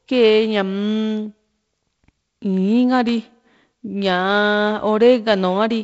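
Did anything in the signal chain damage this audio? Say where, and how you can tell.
Yes. A bit error spike appears at 3.09 s, most likely a single flipped bit in memory or on a digital link, corrupting a few consecutive samples. Those values jump by a power of two and snap back, giving one sharp broadband tick unrelated to the speech, heard over the G.722-style band limit near 7.7 kHz.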